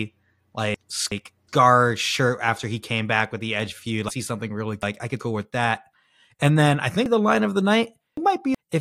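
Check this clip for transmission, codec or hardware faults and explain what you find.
The clip has one fault type, chunks out of order, occurring three times. At 0.74–1.49 s, just before "shirt after he came", a 0.37 s chunk plays one slot late. At 4.09–5.20 s, before "with that", it plays two slots late. At 7.06–8.55 s, after "then I", it plays three slots late. Nothing is lost, but the segments are swapped, giving jumbled speech with hard joins.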